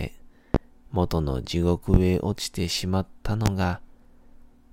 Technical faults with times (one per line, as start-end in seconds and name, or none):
0.54-0.58 loud pop
1.94-1.98 loud pop
3.46-3.50 loud pop